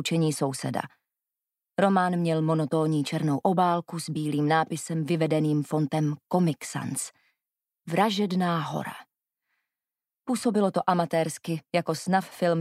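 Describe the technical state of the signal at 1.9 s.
At 1.9 s the signal is intact, with no dropout, distortion, glitch or other fault to be heard at that point.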